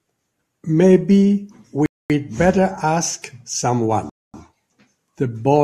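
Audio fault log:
1.86–2.10 s and 4.10–4.34 s, rebuffering stall: The speech drops to silence twice, for about 240 ms each time. It then picks up exactly where it stopped. No sound is skipped or repeated. The player ran out of downloaded audio and waited for more data before continuing. Because playback simply paused, each gap adds time rather than removing content. Together the two pauses stretch the clip by roughly half a second.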